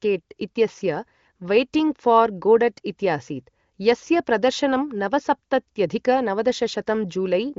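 No technical faults can be heard in this speech. It carries the sound of the AMR wideband (HD Voice) codec at what seems to be one of its higher rates, with nothing above about 7.5 kHz.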